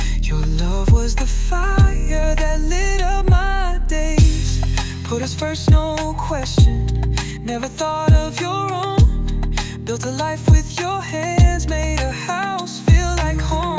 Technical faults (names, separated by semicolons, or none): none